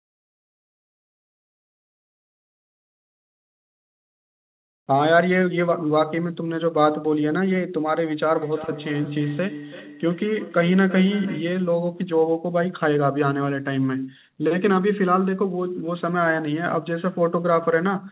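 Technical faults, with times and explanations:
8.35 to 11.64 s, feedback echo between two devices: the speech comes back at a steady interval of roughly a third of a second, each return thinner and more ringing than the last, peaking at about 15 dB below the direct speech. That's two devices in the same room on the call: one plays the other's audio, the mic grabs it again, and neither echo canceller touches sound it didn't play itself. It rides on the call's narrowband sound, with nothing above 4 kHz.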